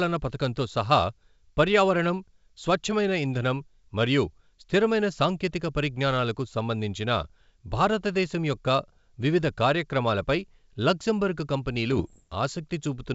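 From 11.92 to 12.23 s, bit errors on the ADPCM link cause pops and rough bursts, as about half a percent of flipped bits knock the decoder's step size off.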